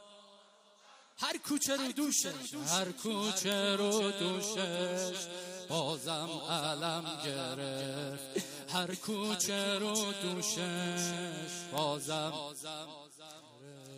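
From 0.31 s to 13.62 s, word clock ticks sound about every half second, around thirty sharp clicks of uneven strength. The receiving clock is unlocked and drifting roughly fifty ppm from the sender, each slip fitting one dropped or repeated sample. A spectrogram shows evenly spaced thin vertical broadband lines, and the waveform shows single-sample spikes.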